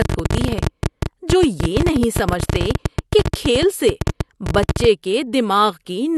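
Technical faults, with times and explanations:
0.02 to 4.85 s, train of clicks: Sharp, similar pops tick over the speech and its pauses. They come about 15.7 times a second at an uneven pace, around seventy in all. Peaks stand roughly 15 dB above the speech. Likely cause: nearby interference or a faulty connection or power supply.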